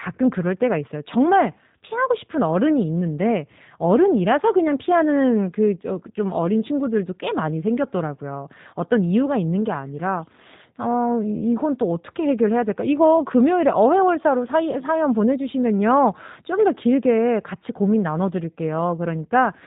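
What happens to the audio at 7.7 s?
At 7.7 s you're hearing the same G.729 codec damage that runs through the whole clip. The speech is rebuilt from a vocal tract model plus a few pulses per frame, so it sounds rough and slightly synthetic. Nothing above 3.8 kHz survives, which fits an 8 kbit/s codec.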